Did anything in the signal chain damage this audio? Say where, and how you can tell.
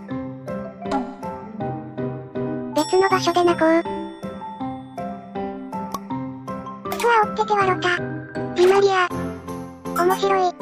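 No, nothing along the signal chain shows audible damage: the signal arrives with no detectable defect introduced by any stage between capture and playback.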